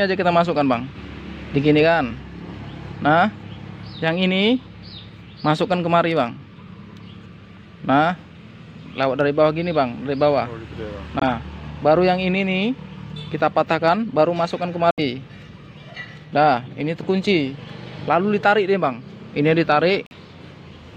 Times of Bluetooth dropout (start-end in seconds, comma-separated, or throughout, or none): 11.19-11.24, 14.91-15.00, 20.06-20.13